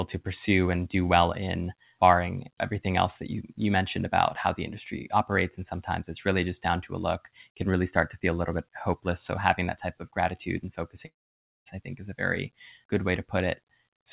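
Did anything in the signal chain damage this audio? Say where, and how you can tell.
Yes. At 11.06 s, after "type of gratitude and", a fading buzz gives way to silence until 11.68 s: likely a long network dropout, concealed by the receiver.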